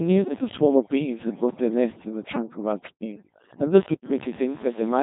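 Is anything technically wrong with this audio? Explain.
Yes, two faults run through the whole of this speech recording.

The first is overdone noise removal. A noise reduction stage was pushed too hard, so any frequency band sitting near its noise estimate gets pulled right down or switched off, and the softer parts of the voice are cut along with the noise. The background drops to near silence sprinkled with twinkling, chirpy specks. Unlike a simple low-bitrate smear, those isolated tonal specks flicker on and off.

The second is Codec 2 vocoder coding. Instead of keeping the waveform, this vocoder transmits only pitch, voicing, energy and a rough spectral envelope, and the decoder rebuilds the voice from sine waves. The damage here is heavy: the speech sounds robotic and buzzy, with nothing above 3.8 kHz, which fits Codec 2 at around 2.4 kbit/s. A conventional waveform codec keeps some natural texture even when starved of bits. 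This clip has a synthetic, mechanical buzz throughout instead.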